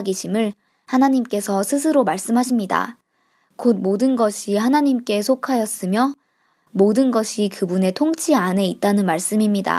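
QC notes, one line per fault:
No faults found in this speech recording.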